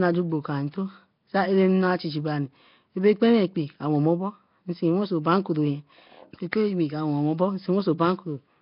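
Speech throughout carries a rough, hissy halo and a smeared, underwater quality, with nothing above about 5.3 kHz, likely from heavy Nellymoser compression at a low bitrate around 22 kbps, where weak bands get no bits and are filled with noise. At 6.52 s, a brief hiss of about 10 ms precedes a sharp attack and softens it. This is pre-echo: the codec's quantisation noise, sized for the loud onset, spreads across the whole block into the quiet moment before it.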